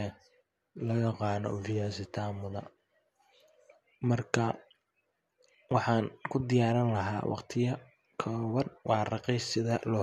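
Nothing here stands out as a technical fault; the speech carries on without any audible glitch or break.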